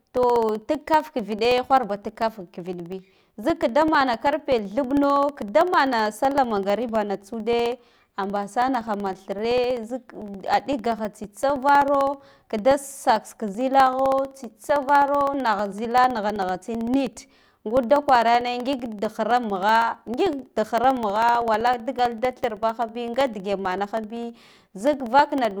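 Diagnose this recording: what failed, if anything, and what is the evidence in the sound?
Periodic USB or driver dropouts run from 0.1 s to 25.5 s: roughly 1 ms silent gaps every 64 ms tick through the speech as the driver stalls.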